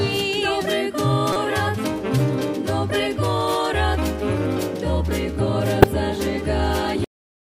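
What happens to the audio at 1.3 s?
At 1.32 s a short burst of wrong sound cuts in and lasts to about 1.36 s, roughly 44 ms. It is a corrupt frame decoded. Bits inside the compressed data were flipped, and the decoder played the damaged frames anyway. Misread codes and gains put energy at the wrong frequencies. About two frames are hit. The result is a brief chirp or noise blip that peaks at about -10 dBFS.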